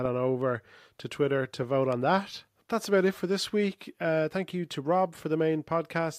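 Nothing in this speech recording stands out as a technical fault, so there's nothing here to flag.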